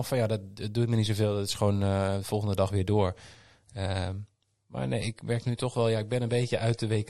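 Right after "de volgende dag weer", at 2.91 s, the speech abruptly loses its top end. Nothing above 11.5 kHz remains, and a swirly, smeared coding texture appears and lasts to the end of the clip, with no gap at the switch. This is an adaptive stream at a lower bitrate: the player dropped to a cheaper encoding when the connection slowed. The sound points to MP3 falling from about 128 to 48 kbit/s.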